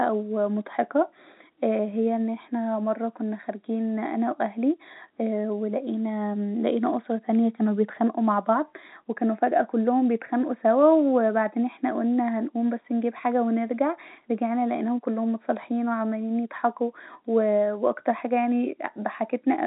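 No technical faults turn up anywhere in this speech recording, and the G.711 telephone coding path it travels through shows only the narrow band and faint level-following hiss expected of that format.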